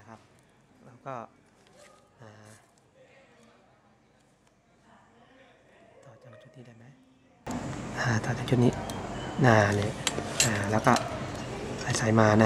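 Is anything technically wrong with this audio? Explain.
Yes. From 0.0 to 7.47 s the sound nearly vanishes, falling about 27 dB. The likely cause is one channel inverted. One stereo channel has reversed polarity, so shared content cancels when summed to mono. Only the difference between channels remains.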